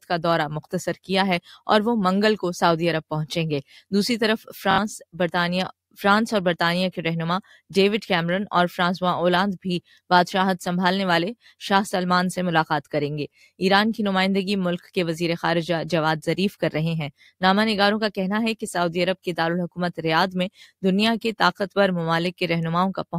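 Lost Bluetooth packets from 4.71 to 4.78 s, about 70 ms, made the receiver replay its last slice: a brief Bluetooth stutter buzz, then the audio skips ahead.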